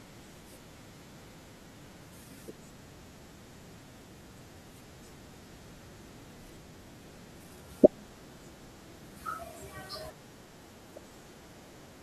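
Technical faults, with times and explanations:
10.32 s and 11.86 s, compressed frames skipped: the speech jumps ahead by about a fifth of a second, then about 0.4 s, as runs of whole 21.3 ms frames go missing or are rejected.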